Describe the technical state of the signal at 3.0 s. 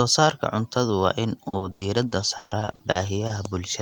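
Choppy and robotic at 3.0 s, with pieces of the sound dropping out. The moment falls inside a stretch of repeated packet loss running from 1.49 s, just after "cuntadu waa in", to 3.39 s. Across that span, eleven gaps of up to 140 ms were each patched by stretching the preceding sound, so about 27 % of the stretch is concealed, with roughly 0.4 s of audio rebuilt rather than real.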